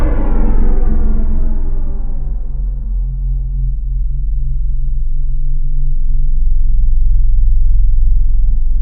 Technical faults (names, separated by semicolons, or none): none